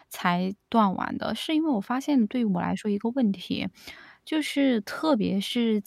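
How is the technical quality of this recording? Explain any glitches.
Nothing in the recording stood out as a technical problem on listening, so there are no glitches to explain.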